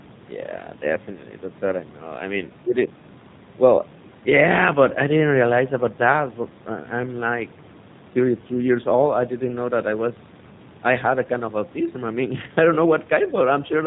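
Throughout, G.729 codec damage is plainly audible: the speech is rebuilt from a filter and sparse pulses, which fits an 8 kbit/s codec, so it sounds rough and synthetic. A spectrogram shows a hard ceiling at 4 kHz.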